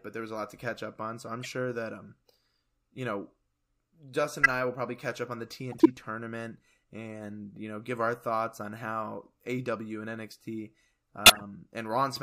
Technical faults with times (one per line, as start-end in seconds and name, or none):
1.43-1.46 corrupt frame decoded
4.43-4.49 corrupt frame decoded
5.72-5.86 corrupt frame decoded
11.26-11.41 corrupt frame decoded